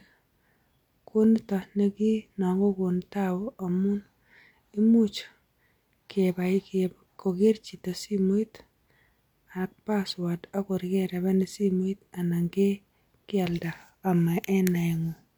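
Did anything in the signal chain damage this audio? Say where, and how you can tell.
No, nothing in the signal chain damaged this audio.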